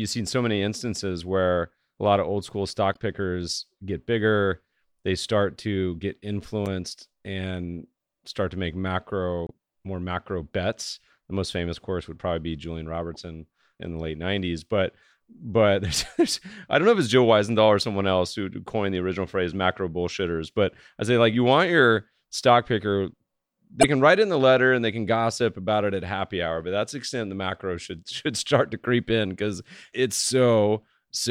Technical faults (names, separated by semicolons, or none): damaged data in a compressed stream